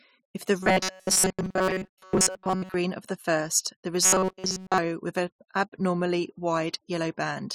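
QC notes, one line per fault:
0.61–2.75 s: robotic sound from repeated short buffers. Speech becomes a rigid metallic buzz at 188 Hz, likely from a roughly 5.3 ms buffer replayed over most of the audio.
4.03–4.78 s: robotic sound from repeated short buffers. Buzz at 188 Hz again, with the repeats likely filling nearly all of this stretch while the real audio is skipped.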